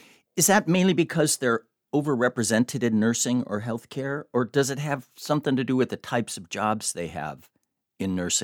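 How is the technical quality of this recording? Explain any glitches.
No technical glitches can be heard in this recording. Nothing in the signal breaks off, jumps or changes unexpectedly at any point.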